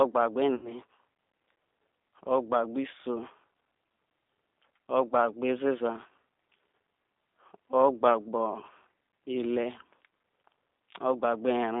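Throughout the speech, the G.729 codec is plainly audible: the line band runs only from 250 Hz to 3.6 kHz, and rebuilding each frame from a vocal tract filter, pitch predictor and sparse pulses, consistent with 8 kbit/s G.729A, leaves the voice rough and synthetic.

From 0.55 to 0.73 s comes VoIP packet loss concealed by the speech codec. About 80 ms of audio is missing, which fits four lost packets. The decoder extends its last pitch and filter at falling gain, producing a fading buzzy tone or coloured noise, and the voice stays weak or distorted as frames rebuild.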